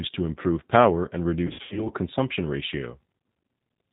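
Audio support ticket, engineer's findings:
G.729 codec throughout, 8 kbit/s. Band-limited, nothing above 4 kHz. Speech rough and synthetic, plainly audible. Cause: low-rate vocal tract filter plus sparse pulse excitation rebuilding each 10 ms frame. Fidelity capped by codec choice.

VoIP packet loss concealed by the speech codec, 1.47 to 1.89 s, after "to improve power and", before "consumption ratio". About 210 ms missing across 300 ms, longest gap 90 ms. Decoder repeats last pitch and filter, buzzy tone or coloured noise, fading. Voice weak or distorted for tens of ms after packets return.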